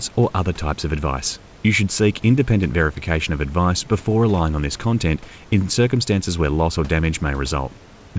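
No technical faults heard.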